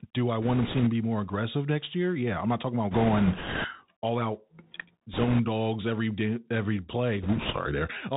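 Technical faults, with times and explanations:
Throughout: Bluetooth CVSD headset codec. The whole thing has that narrowband headset sound, with nothing above about 4 kHz, which fits a 64 kbps CVSD link. CVSD sends just one up-or-down bit per sample with a step size that keeps adapting, so it can't keep pace with loud, bright sounds. Sibilants turn scratchy and edgy, and a grainy hiss sits under the speech the whole way through. The damage is plainly audible.
0.42–0.88 s, 2.91–3.66 s, 5.13–5.41 s and 7.22–7.56 s: bit errors on a Bluetooth voice link. Four bursts of rushing, crackly noise land on the speech. The first ends just before "be more aggressive next", the third runs up to "dogs every day every", and the last follows right after "dogs every day every". Bits are getting flipped on the link, a few percent of them. Every CVSD bit carries the same small weight and each error fades out quickly, so you get a wash of crackle instead of sharp clicks.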